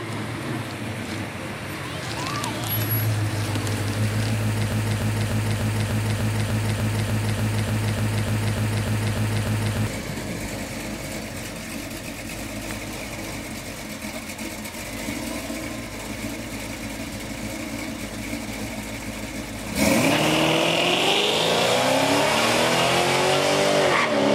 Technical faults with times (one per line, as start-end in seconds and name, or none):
4.72-9.87 broken-record loop